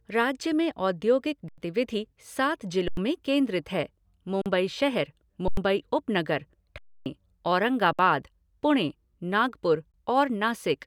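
Speech with underrun with held sample dropouts at 1.49, 2.88, 4.42, 5.48, 6.78, 7.93 and 9.92 s, lasting 21 to 279 ms. The buffer ran dry and the output froze flat. About 93 ms gaps fit a 4096-sample buffer. Live audio was lost during each gap, e.g. after "राज्य में औद्योगिक".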